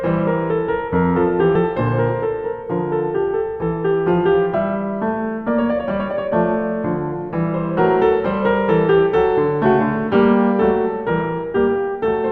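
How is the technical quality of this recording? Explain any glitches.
The music carries one glitch, a brief dropout-jump near the start. Compressed frames skipped at 1.55 s: the decoder loses a short run of encoded blocks, probably about two frames of 32 ms each, so roughly 70 ms of music never plays and the track lurches forward, with the music resuming slightly ahead of where it left off.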